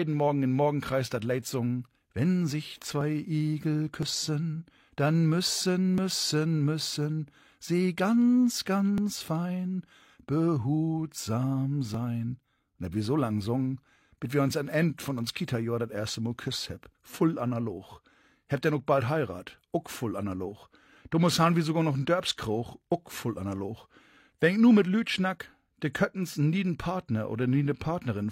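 At 3.01, 4.03, 5.98, 8.98 and 11.94 s there is overlap between stream segments. The 1-second segments' timestamps overlap, so 23 to 38 ms of sound is discarded at each boundary. The waveform jumps, giving a short click or skip.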